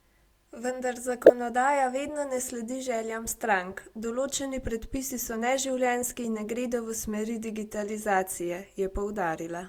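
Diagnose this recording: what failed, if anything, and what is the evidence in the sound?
The codec stage failed: corrupt frame decoded. Damaged compressed frames were played anyway, so misread gains and codes put energy at the wrong frequencies. The clearest is a loud burst from 1.24 to 1.30 s, peaking around -5 dBFS, long enough to suggest a couple of frames. A faint blip follows at 8.10 to 8.12 s, well below the speech, about one frame long. A brief, moderately loud click occurs at 9.14 s.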